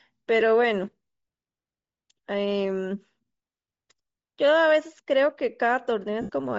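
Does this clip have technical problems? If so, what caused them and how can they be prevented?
Yes. Throughout the speech the upper frequencies sound thin and grainy, with a breathy, noise-like edge on sibilants and vowels, where fine detail has been replaced by synthetic noise. The likely cause is Bluetooth LC3 compression at a low bitrate: the LE Audio codec discards much of the high-frequency spectrum to fit the link and fills the gaps with noise. The damage is plainly audible and fits a setting around 32 kbps with short 7.5 ms frames. To prevent it, raise the LC3 bitrate or use a higher-quality LE Audio configuration, or record over a wired path.

There are two dropouts caused by lost LE Audio frames. At 0.40 s a very brief gap, about 7.5 ms long and consistent with one missing frame, is covered by the decoder re-using the previous spectrum with randomised phase, leaving a short noisy smear. 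From 6.21 to 6.29 s, about 75 ms and roughly ten frames, the concealment runs longer: the repeated spectrum turns into a hissy blur and then fades toward silence before normal decoding resumes. To prevent this, reduce radio interference and distance between devices so fewer packets are dropped in transit.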